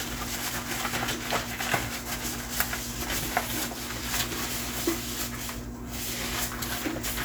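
No faults are audible anywhere in the recording.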